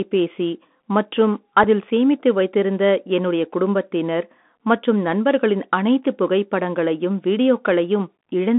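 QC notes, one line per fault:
throughout, Bluetooth CVSD headset codec: the speech is squeezed into a narrow line band of about 200 Hz to 3.5 kHz. The one-bit delta coder's adaptive step can't follow fast, loud high content, so sibilants turn scratchy over a granular hiss, plainly audible.
1.64 s, unconcealed Bluetooth headset packet loss: a hole of about 4 ms, which fits a single lost packet. It was filled with silence or an idle pattern rather than concealed, so the speech breaks off with abrupt edges, just before "சேமித்து வைத்திருந்த என்னுடைய குடும்பத்தினர்".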